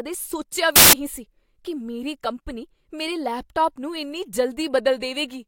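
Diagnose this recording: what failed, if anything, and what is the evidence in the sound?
Samples built from the wrong bytes, 0.76 to 0.93 s: a sample-format conversion fault. For that stretch the speech gives way to loud, harsh broadband noise, because the bytes of each sample were assembled misaligned or in the wrong order, so fast-changing low bits became the dominant part of every value.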